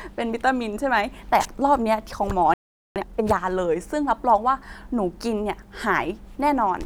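At 2.54 s the speech just drops out, and there's a playback stall of about 420 ms of dead silence until 2.96 s. The sound simply halts mid-flow and then resumes. The likely cause is the player running dry on buffered data, or its audio thread getting held up for a moment, so nothing reached the output during that gap.

Right after it, from 2.96 s to 3.38 s, you get time-compressed catch-up. The player is clawing back the backlog it built during the stall by snipping out small pieces and cross-fading across the joins, here running at 2.0x. The speech comes out noticeably rushed but keeps its normal pitch over that stretch before things settle back to normal pace.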